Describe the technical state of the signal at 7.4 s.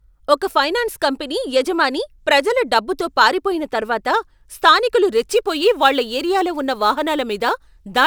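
At 7.4 s the signal has sample clock jitter. It begins at 5.14 s, after "డబ్బుతో పారిపోయిన తర్వాత స్థానికులు", and runs to the end. The converter clock wanders by a few microseconds. Steep waveform slopes turn this into hiss roughly 30 dB below the speech, louder on bright sounds and gone in pauses.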